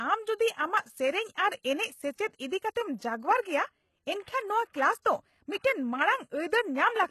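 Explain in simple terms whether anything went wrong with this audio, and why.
HE-AAC compression likely accounts for the damage heard across the whole clip, from start to finish. The speech has a clearly degraded, processed quality, and nothing is present above about 12.3 kHz. This kind of codec keeps only the lower range properly and fakes the treble by copying lower sounds upward. Because that copied top end doesn't match the real voice, s sounds come across gritty, metallic or lisping.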